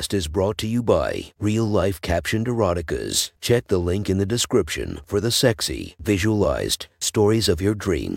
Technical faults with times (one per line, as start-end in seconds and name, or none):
none